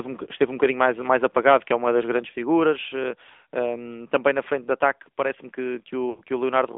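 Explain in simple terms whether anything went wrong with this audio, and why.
Yes, two things went wrong. The whole clip went through the AMR narrowband mobile codec, the speech codec used on older phone networks. It keeps only a thin slice of the sound, roughly 250 Hz to 3.6 kHz, so the voice sounds boxy and muffled. Instead of sending the actual sound, it sends a rough model of the voice and rebuilds it, which here leaves a plainly audible buzzy, slightly artificial edge.

Near the end, from about 6.10 to 6.22 s, there are lost AMR speech frames. Roughly 80 ms of data didn't arrive intact, likely because of errors on the radio link, which fits about four of the codec's 20 ms chunks going missing. The decoder covers the gap by stretching out the last good bit of voice while fading it down, so you hear a brief smeared, wobbly dip before the speech comes back a little rough.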